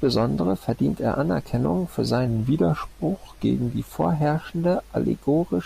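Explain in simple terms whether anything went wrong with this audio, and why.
Between 2.27 and 3.91 s the speech drops slightly in pitch and slows down, then returns to normal. This is a wrong sample rate fault: the audio is played back at a different rate than it was recorded, with no conversion. Speed and pitch therefore shift together, here to about 0.92 times normal speed and roughly 1.5 semitones lower. That ratio fits material recorded at 48 kHz being played as if it were 44.1 kHz.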